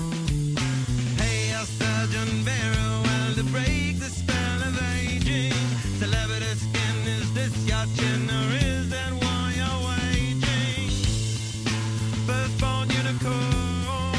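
No technical faults can be heard anywhere in the audio, and the signal stays continuous and steady throughout.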